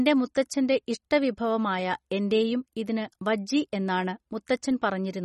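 Throughout, a starved encoder, likely MP3 compression at a rate that fits about 32 kbps, cuts everything above 11.8 kHz, leaving the speech plainly watery and swirly.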